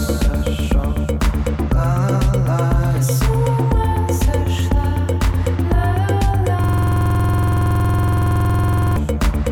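From 6.64 to 8.96 s the sound locks into a rapid, rigid stutter, a rough buzz at 21.5 Hz as one 46 ms fragment repeats about 50 times. This is a system hang loop: the system froze while the audio hardware kept replaying one ring buffer, which fits a 2048-sample buffer.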